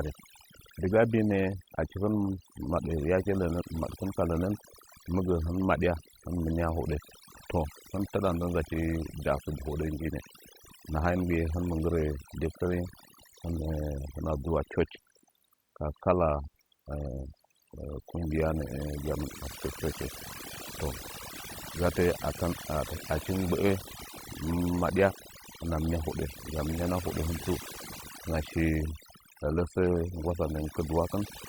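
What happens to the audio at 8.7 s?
At 8.7 s you're hearing overdone noise removal, and it isn't a one-off there; it runs through the whole clip. The denoiser was pushed too hard, so any frequency band sitting close to its noise estimate gets pulled right down or switched off, and the softer parts of the speech get caught along with the noise. You end up with a lowered background that breaks up into little twinkling, warbling specks.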